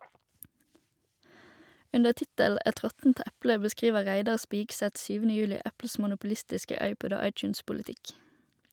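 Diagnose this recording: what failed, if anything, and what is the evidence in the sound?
Nothing failed here: listening across the speech, no stage of the chain leaves any mark, so there's nothing to diagnose.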